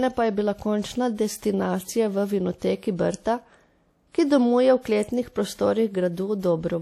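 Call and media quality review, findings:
WMA compression, whole clip: ringing, washy speech with a hiss that swells and fades with the level. Nothing above 16.1 kHz. Likely a WMA 1 encode, consistent with about 48 kbps. Long transform blocks smear quantisation noise across tens of ms; weak spectral lines get zeroed. Damage is plainly audible.

Pre-echo, 6.39 to 6.43 s: soft hiss arriving just ahead of a sharp onset, about 36 ms early, with the attack itself blunted. Same transform codec: the attack sits late in its block, so noise sized for the loud part spills into the quiet lead-in.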